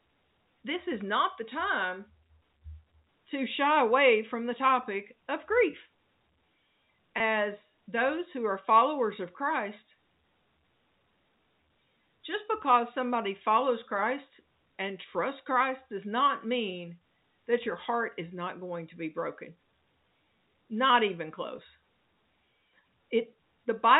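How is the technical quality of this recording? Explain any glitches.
Two brief dropouts mark the recording, carried over telephone-band G.711 coding that cuts off everything above 4 kHz. Packet loss with pitch repetition occurs at 7.18–7.20 s and 21.56–21.58 s. Each gap, about 20 ms and consistent with a single lost packet, was filled by repeating the last pitch cycle, producing a momentary held, buzzy smear in the speech.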